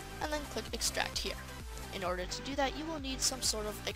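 From 2.22 s to 3.22 s the sound turns dull. This is channel delay (comb filtering): one channel runs a couple of samples late, about a twentieth of a millisecond, and summing to mono cancels content common to both. With so short an offset the first notch sits high, around 10 kHz, dulling the top end. A spectrogram shows a dark horizontal band there for that one second, and the waveform shows no break.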